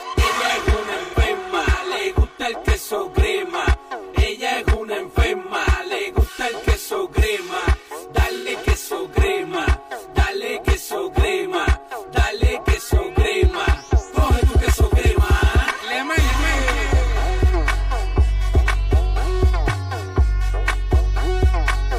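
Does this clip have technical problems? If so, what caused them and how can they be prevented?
Yes. A steady channel delay (comb filtering) runs through the whole clip, and AAC frame loss with concealment breaks in three times.

The channel delay gives the audio a hollow, phasey colour that never changes. One channel arrives around 3 ms late, and when the two are summed to mono, whatever they share cancels at a first notch near 200 Hz and at evenly spaced frequencies above it. Because the notches stay put, it sounds like fixed coloration rather than a moving flanger sweep or a drifting phase problem. To prevent it, align the channels in time, or check for a stray delay before any mono fold-down.

The AAC frame loss shows up at 1.03–1.14 s and 8.37–8.48 s, each lasting about 85 ms, and at 16.31–16.36 s, lasting about 43 ms. The longer gaps point to two lost frames and the short one to a single frame. 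At each point the decoder patched over the gap by reusing the last good spectrum. That produces a brief smeared, noisy, phasey blur instead of the hard silence or click of a plain dropout. To prevent it, use a transport with error protection or retransmission and an adequate jitter buffer so that frames reach the decoder intact.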